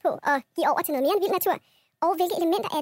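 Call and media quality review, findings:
Wrong sample rate throughout: speech 1.5x fast, 7 semitones high, fits 32 kHz audio played at 48 kHz. Spectrogram: harmonics and formants raised 1.5x, time-compressed.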